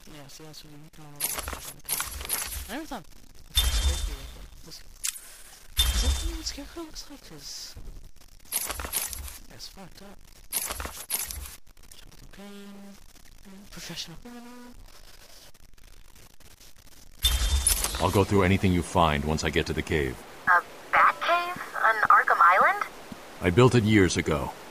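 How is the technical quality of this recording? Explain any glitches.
The recording is marred throughout by a grainy noise that rides on everything, and even the quiet gaps never fall silent but fill with a gritty noise. The likely cause is a stuck bit: one bit in the sample data held permanently at 0 or 1. About half of the samples are pushed off by that bit's weight, a step of roughly -45 dBFS, so the error follows the waveform and turns near-silence into constant hiss-like grit.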